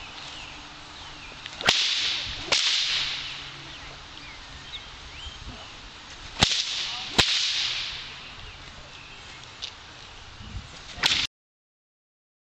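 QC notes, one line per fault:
11.26–12.44 s, cut-off end: the sound stops abruptly mid-event at 11.26 s and falls straight to digital silence for the remaining 1.2 s, with no natural decay, because the final buffers were never written or played out.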